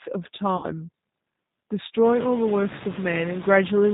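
From the first moment the speech passes through a G.729 codec, with plainly audible damage. At 8 kbit/s it rebuilds each frame from a vocal tract model and sparse pulses, so voicing turns rough and synthetic. A spectrogram shows nothing above 4 kHz and smeared, grainy harmonics.

A noise suppressor also acts throughout, pulling steady noise down by about 21 dB between phrases. That is heard most clearly after the room noise rises around two seconds in. On a spectrogram the noise floor sinks in the gaps and rises again under the words.

From 0.57 to 0.66 s, VoIP packet loss concealed by the speech codec replaces about 60 ms of audio, which fits three lost 20 ms packets. The decoder repeats its last pitch and filter with falling gain, so the speech smears into a fading buzzy tone or coloured noise. The waveform shows a shrinking envelope, and on a spectrogram the sound runs flat and unchanging before the speech recovers, weak or distorted.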